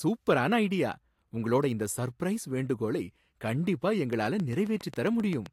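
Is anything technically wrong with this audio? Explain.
Yes. Just after "இந்த சர்ப்ரைஸ் வேண்டுகோளை கண்டிப்பா", from 4.13 to 5.47 s, a train of clicks of about ten sharp, evenly spaced ticks sits over the speech at 7.5 per second, peaking a few decibels above it. Interference from nearby equipment or a faulty connection or power supply is the likely cause.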